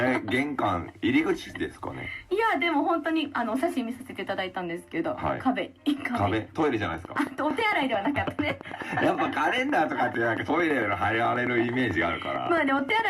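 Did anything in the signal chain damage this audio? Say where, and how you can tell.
Yes, there's a train of clicks running from 6.84 s right through to the end, a steady tick about 9 a second that sits roughly 10 dB above the sound and doesn't stop for gaps. That regular, same-shaped pulse likely points to interference getting into the analogue wiring or a faulty connection or power supply.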